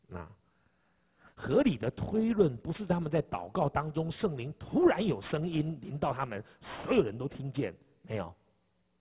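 Aliasing runs throughout. The rate was lowered without filtering, which fits 8 kHz. Content above 4 kHz folds back as faint, gritty, metallic false tones.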